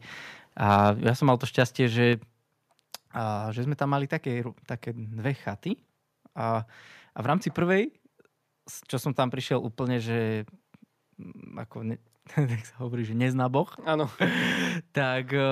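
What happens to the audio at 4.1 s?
Nothing goes wrong at 4.1 s; the speech carries on intact through that moment, with no dropout, click, distortion or other fault to be heard.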